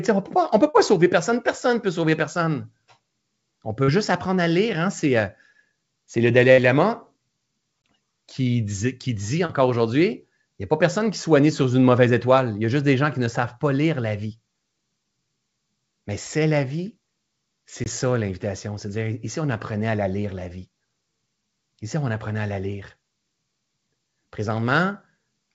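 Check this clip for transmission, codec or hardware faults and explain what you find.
There are three kinds of fault in this speech clip, all from the network and packaging side, heard over a band that stops at 8 kHz, which fits a wideband call codec like G.722.

Short concealed packet loss shows up three times: 0.70–0.76 s, 3.84–3.90 s, and 9.46–9.51 s just after "qui dit". Each time about 40 ms of audio never arrived, and the receiver papered over it by extending the last bit of sound before fading back into the real signal. You hear a quick smear or wobble, and a small consonant-sized piece can just disappear.

There's a burst of packet loss at 6.52–6.60 s. This is a longer hole, about 60 ms missing in a row, too long for a clean patch. The receiver keeps stretching the previous sound while turning it down, so you get a brief held buzz or fading hiss. Then the speech picks up further along, with that stretch simply gone.

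The gap between chunks happens twice, at 7.82 s right before "qui dit" and at 17.84 s right before "ça l'invitation". The spacing is 10 s, so the audio was clearly handled in 10-second pieces, and each join leaves a 20 ms hole of silence, likely from padding or late playback start. Nothing is lost, but each join gives a short hole or dip in the sound.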